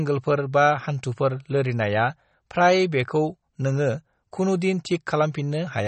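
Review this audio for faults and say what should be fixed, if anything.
MP3 compression, throughout the speech: nothing is present above 8.4 kHz, and the sound has a plainly audible watery, swirling quality. This is likely a low-bitrate MP3 encode, around 34 kbps, where the encoder cut the treble and dropped weak frequency lines from frame to frame. To prevent it, keep a lossless master and encode at a much higher bitrate.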